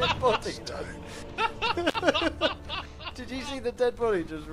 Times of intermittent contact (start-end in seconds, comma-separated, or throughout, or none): 1.88-1.95